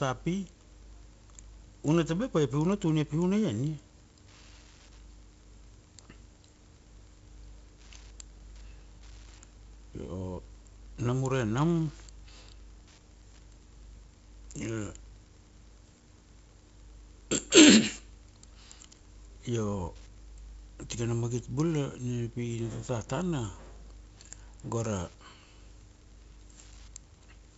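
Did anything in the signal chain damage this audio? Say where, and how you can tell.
Yes. Throughout the speech there is a faint, steady ticking about ten times a second, well below the voice. That is Wi-Fi interference in the analogue wiring: a nearby radio's beacon every 102.4 ms is being rectified by the audio circuit and added to the signal.

The codec stage also did heavy damage. A gritty hiss rides on the speech and rises and falls with its loudness, and nothing remains above 7.7 kHz. That is 4-bit ADPCM compression, whose adaptive-step quantising error tracks the signal. The bandwidth fits a 64 kbps stream at a 16 kHz sample rate.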